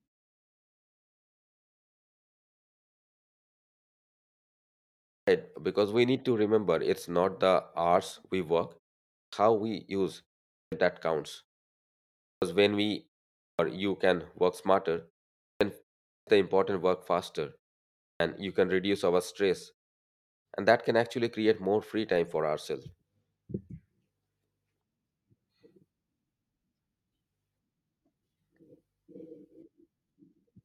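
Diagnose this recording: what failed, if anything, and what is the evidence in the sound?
Speech resumes abruptly after pauses at 5.09, 9.12, 10.54, 12.24, 13.39, 15.42, 16.07 and 18.0 s, losing about 180 to 205 ms each time: a clipped start after a pause, from a playback device waking too slowly.

From 22.0 to 23.07 s a 25 Hz buzz tracks the level. This is a filter restarted on every block in processing, with each block starting from zero and adding a tick.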